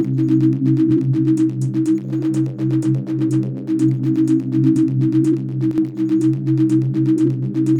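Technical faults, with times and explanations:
5.71–5.78 s, one channel drops out: the music abruptly dips by about 6 dB, likely from one stereo channel vanishing, which halves the content common to both in the mono sum.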